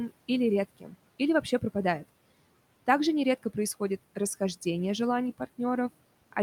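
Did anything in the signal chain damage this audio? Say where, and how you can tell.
Yes, the call processing stage did, specifically the noise suppressor. From 0.80 to 0.94 s the speech gets pulled down by about 12 dB, so that bit sounds swallowed and faint, roughly 150 ms of it. What's happening is the suppressor misread that stretch of speech as background and gated it along with the room noise. That room noise itself, sitting about 20 dB under the speech, is just part of the recording.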